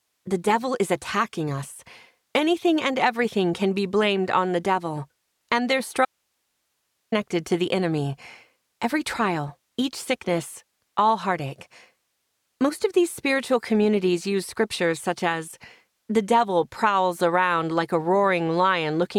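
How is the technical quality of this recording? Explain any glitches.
An audio dropout to a faint residue runs from 6.05 to 7.12 s. For about 1.07 s the sound cuts off abruptly, leaving only hiss some 50 dB below the normal level. The likely cause is a brief loss of the wanted signal while the path after the break stayed live.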